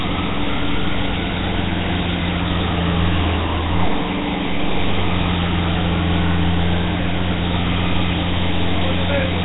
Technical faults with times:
0.00-9.44 Nellymoser compression

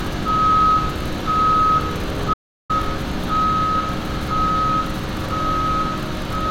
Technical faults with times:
2.34-2.70 audio dropout to silence

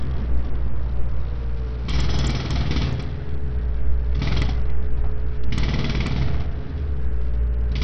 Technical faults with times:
0.00-7.84 Bluetooth SBC compression

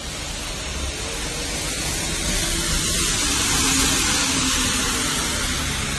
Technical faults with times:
0.00-5.99 transcoding between lossy codecs

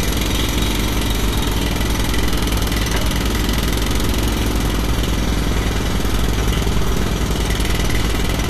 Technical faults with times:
0.00-8.49 Vorbis compression

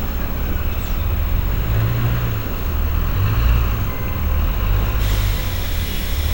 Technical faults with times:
0.00-6.33 video or display buzz

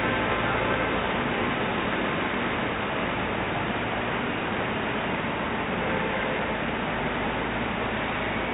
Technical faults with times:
none

